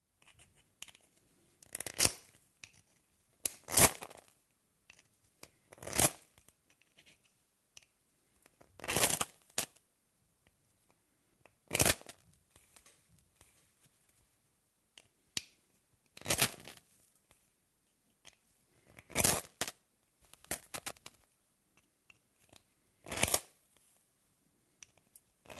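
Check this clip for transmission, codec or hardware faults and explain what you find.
Nothing stands out as a problem here; the sound comes through just as you'd expect after an ordinary call path, with the highs rolling off around 12 kHz where the codec's bandwidth ends.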